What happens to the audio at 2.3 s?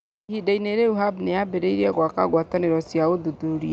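At 2.3 s the level is still climbing: automatic gain rising, which runs from 0.26 s to the end of the clip. The gain control judged the input too quiet and keeps pushing its gain up, so the speech and the background noise swell together rather than the speech alone getting louder. On a waveform the envelope widens steadily across the whole span; on a spectrogram the entire band darkens together, noise floor included, beneath the call path's cut-off near 8 kHz.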